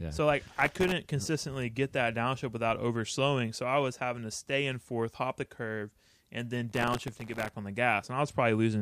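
A speech recording with gritty, tearing crackle from 0.48 to 0.92 s, before "consistently get that downshift", and from 6.70 to 7.54 s, between "the curve and then" and "on the". This is processor overload crackle, where dozens of sub-millisecond buffers miss their deadlines in a row and each one replays stale audio.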